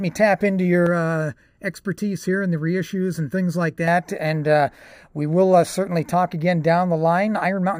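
From 0.87 to 3.88 s, channel delay (comb filtering) makes the speech hollow: one channel runs under a millisecond late, carving fixed notches from roughly 700 Hz upward, unlike flanging's sweep.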